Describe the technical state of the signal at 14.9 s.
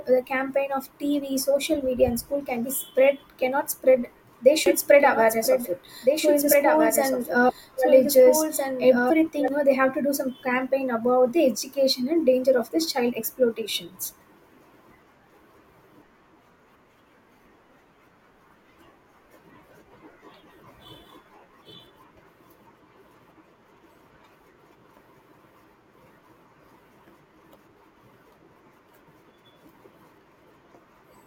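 At 14.9 s the speech signal is intact, with no audible fault at that moment.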